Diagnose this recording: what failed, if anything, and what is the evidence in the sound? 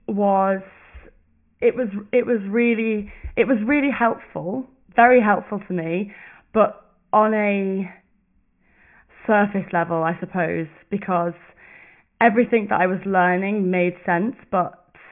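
Nothing failed: across the whole recording no stage between capture and playback leaves any audible defect.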